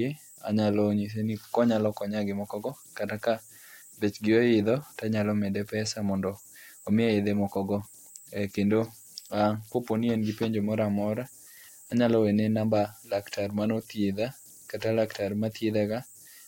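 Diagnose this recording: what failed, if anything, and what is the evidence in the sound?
Converter idle tones throughout: an undithered delta-sigma converter cycles, leaving a faint whistle around 7 kHz, about 28 dB down, drawn as a thin spectrogram line.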